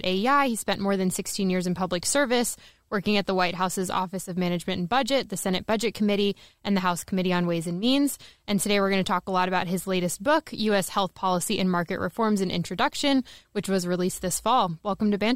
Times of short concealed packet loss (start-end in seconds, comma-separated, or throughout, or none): none